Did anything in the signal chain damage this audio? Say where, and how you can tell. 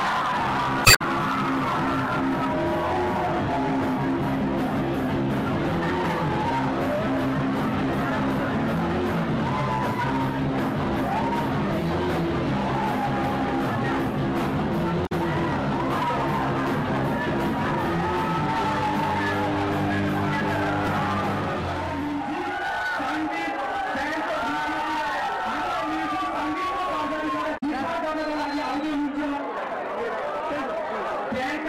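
Yes. The damage happened at the codec stage, where the compressed stream was decoded. I hear damaged data in a compressed stream three times. There are short glitches at 0.82 to 1.02 s, 15.05 to 15.12 s and 27.57 to 27.63 s. After the first one, the timing shifts by about 18 ms. Corrupt bytes made the decoder misread frames and lose sync. It then hunted for the next valid frame header, and that resync produced each blip.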